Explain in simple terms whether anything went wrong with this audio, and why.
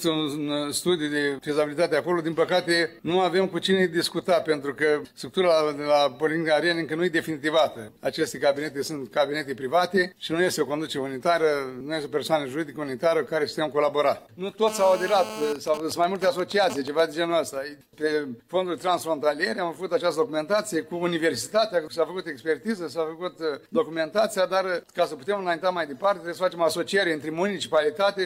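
A mobile phone on the old 2G network was in a call close to the recording equipment, and its radio signal leaked into the audio circuit. The phone transmits in rapid pulses, 217 times a second, and the circuit turned those radio pulses into sound. That is the GSM phone buzz, heard from 14.68 to 15.53 s as a hard, raspy buzz at 217 Hz with a harsh, gritty edge, sitting on top of the sound and unrelated to it.

Right after that, from 15.56 to 17.0 s, the same phone stayed in the call, but its user went quiet, so the phone sent only short groups of radio pulses instead of a constant stream. The circuit picked those up too, producing GSM signalling bursts: even ticks with a longer 217 Hz buzz twice a second. The pulsing comes from the phone switching its transmissions on and off, not from anything in the recorded sound.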